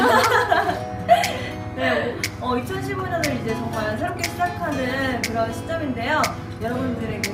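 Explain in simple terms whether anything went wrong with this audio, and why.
Two short bursts of noisy blips cut across the sound, from 1.29 to 1.50 s and from 2.99 to 3.10 s. This is DAB burbling: weak digital radio reception let errors slip past correction, briefly putting blips of noise into individual frequency bands.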